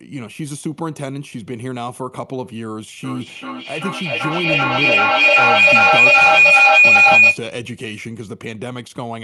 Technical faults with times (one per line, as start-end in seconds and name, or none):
3.04-7.45 feedback howl